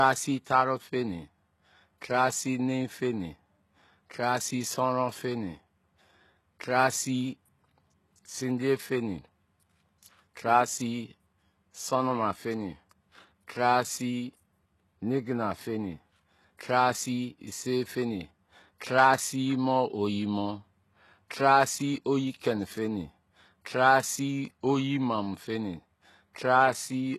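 Throughout the speech, the treble has a synthetic, gritty sheen: s sounds come out lispy and metallic, and nothing survives above about 12.3 kHz. This points to HE-AAC compression, likely at a low rate near 16 kbps. Unlike a plain low-pass, the top stays bright because spectral band replication copies lower bands upward, so its harmonics misalign.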